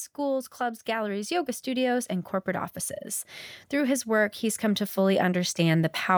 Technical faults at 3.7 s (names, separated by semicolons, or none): automatic gain rising